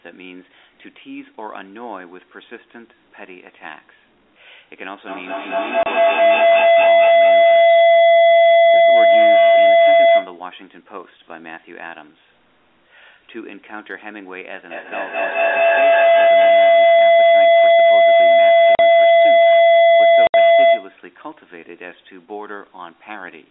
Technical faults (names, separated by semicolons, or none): feedback howl; packet loss filled with silence